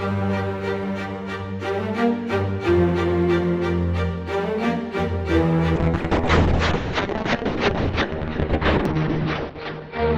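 From 5.76 s to the end, the sound turns rough and muffled, losing everything above 6 kHz: a call bitrate drop, consistent with the encoder falling to about 6 kbps.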